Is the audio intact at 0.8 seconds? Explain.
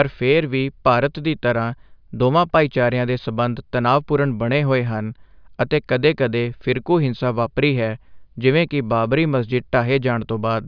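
Yes, the audio is intact at 0.8 seconds, with no dropout, click, distortion or other technical fault at that moment.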